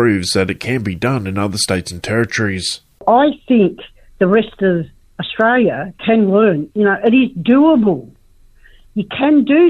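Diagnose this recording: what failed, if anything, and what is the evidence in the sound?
Nothing audible points to a failure at any stage of the chain, so there is no defect here to diagnose.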